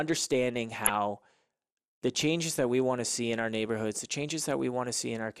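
Throughout, the speech is dull and gurgly, with a granular roughness. This is MP2 compression, likely from a low bitrate around 80 kbps: too few bits force the upper sub-bands off and leave the remaining ones coarsely quantised, so high frequencies flicker in and out.

From 0.85 to 0.94 s, and again from 4.14 to 4.18 s just after "in our neighborhoods the", brief bursts of burbling appear. This is DAB burbling: a fraction of a percent of bit errors slipped past error correction, corrupting the audio data and putting short blips of noise into single sub-bands.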